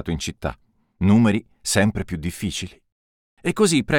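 No technical faults can be heard anywhere in this audio, and the signal stays steady and intact throughout.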